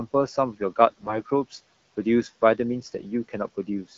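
From 0.87 to 1.21 s the speech turns hoarse and gargly while keeping its rough pitch and level. These are AMR bit errors: a noisy link flipped a heavy share of the weakly protected bits across roughly a dozen AMR-WB frames, misplacing excitation pulses and skewing fine gain and spectral values.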